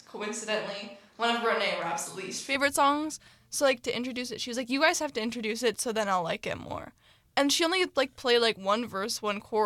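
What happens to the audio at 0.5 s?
At 0.5 s the speech is coming through a switch to a distant microphone, a condition already under way when the clip begins and lasting until about 2.55 s, where the sound changes abruptly. Over that span the voice is roomy and hollow, with thinned low end and audible room noise sitting roughly 35 dB under the speech, though overall level stays about the same. The likely cause is the close microphone's feed dropping out, leaving a farther pickup such as a camera mic capturing mostly reflected sound.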